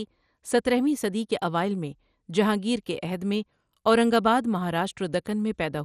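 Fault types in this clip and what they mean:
MP2 compression: speech comes across dull and gurgly, with nothing above 14.4 kHz and upper bands flickering out, likely low-rate MP2, around 64 kbps.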